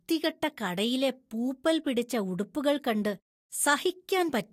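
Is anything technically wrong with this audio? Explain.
Yes. At 1.86 s, just after "കടയിലെ പൂപ്പൽ", the speech jumps slightly ahead. This is likely a dropped buffer (overrun): roughly 10 ms was overwritten before being read. Unlike a dropout, there is no silent gap.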